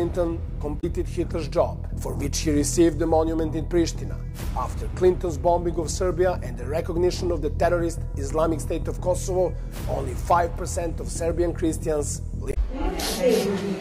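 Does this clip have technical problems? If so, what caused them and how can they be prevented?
Yes. Damaged data in a compressed stream causes brief garbled blips at 0.77–0.84 s and 12.50–12.57 s. Corrupted bytes make the decoder misread frames, lose sync and hunt for the next frame header. Checksummed transfers and verified storage prevent this.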